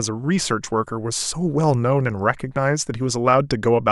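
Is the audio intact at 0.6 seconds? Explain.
Yes, the audio is intact at 0.6 seconds, with no dropout, click, distortion or other technical fault audible at that moment.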